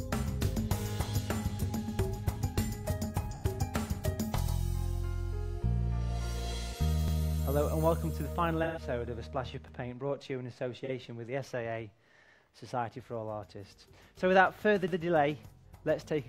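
The audio shows AAC frame loss with concealment at 3.31 s (about 85 ms), 8.63 s (128 ms), 10.84 s (43 ms) and 15.58 s (43 ms). The decoder fills each gap by re-synthesising from the last good spectrum, so each spot sounds like a brief smeared, noisy patch rather than a clean dropout. The durations fit one to three lost AAC frames. Overlapping chunks appear at 4.48 s and 9.68 s, where a 100 ms piece of audio plays twice because the next chunk begins before the previous one finished. Each join is heard as a short stutter or click.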